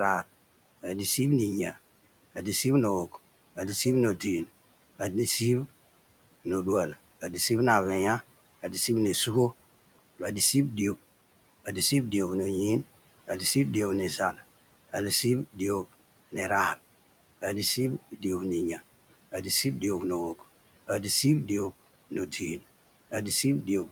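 You've got a speech recording with noise suppressor artifacts running the whole way through. The suppressor pulls down the room noise, which sits about 20 dB under the speech, by roughly 17 dB in the gaps, then lets it back up under each phrase, so the background pumps in and out with the talking.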